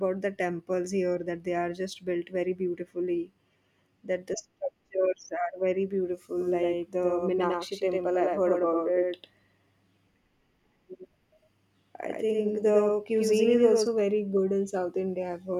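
Speech with a doubled audio track from 6.39 to 13.87 s, after "structures are very beautiful" until "very good": a copy about a tenth of a second late, somewhat quieter, likely from a second capture path. Unlike an echo, it has no decay and cuts in and out abruptly.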